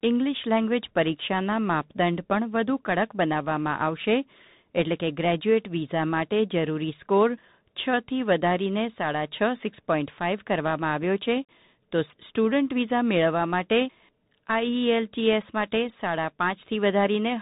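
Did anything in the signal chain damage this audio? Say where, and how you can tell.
Yes. A Bluetooth CVSD headset codec shapes the speech throughout, so the damage sits at the codec stage. The band stops near 3.8 kHz, with nothing above it, and s sounds come through scratchy over a grainy hiss. CVSD sends a single up-or-down bit per sample and adapts its step size, so loud, fast-rising high content outruns the step and distorts. The plainly audible damage fits the 64 kbps Bluetooth voice link.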